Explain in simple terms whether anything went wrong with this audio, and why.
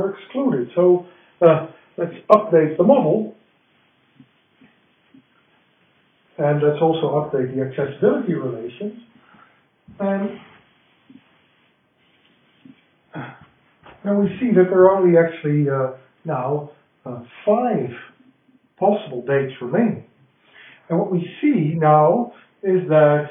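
Nothing went wrong with this audio, since no fault can be heard anywhere in it.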